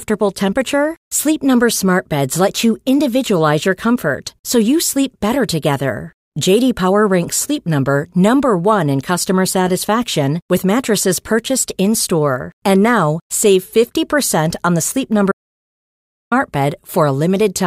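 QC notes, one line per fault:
15.32–16.32 s, audio dropout to silence: the speech cuts out mid-flow and returns after about 1 s of silence with no room tone underneath, most likely because the input was briefly lost while recording continued, so that stretch of speech is gone.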